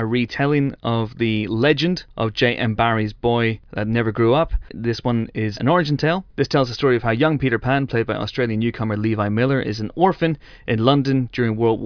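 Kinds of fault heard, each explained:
No technical faults can be heard in this speech recording. Nothing in the audio points to a problem in how it was captured, processed or delivered.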